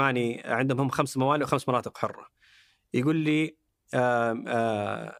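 No technical faults are audible anywhere in the speech.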